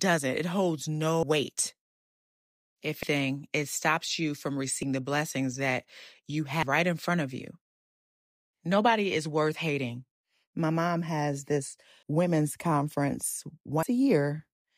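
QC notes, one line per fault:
1.23, 3.03, 4.83, 6.63, 12.03 and 13.83 s, audio missing between chunks. Each is a sudden skip where about a fifth of a second of speech drops out. The cuts mostly come 1.8 s apart. This likely means a recorder working in 2 s blocks that loses a slice at each handover and butts the ends together. Skips fall just before "it stops you from", before "the blessings that you", and before "right in front of".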